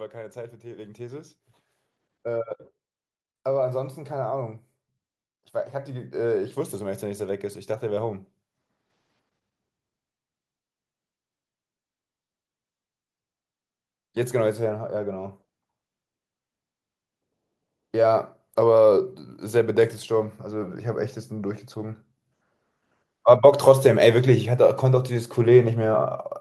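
From 5.71 to 8.22 s, again from 19.51 to 22.05 s, and from 23.64 to 26.09 s, the level swells by about 4 dB. This is automatic gain rising. The gain control judged the input too quiet and lifted it slowly. Speech and background grow louder together.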